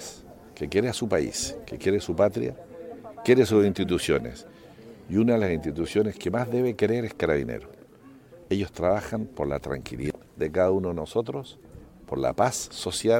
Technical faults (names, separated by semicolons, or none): CD scratch ticks; damaged data in a compressed stream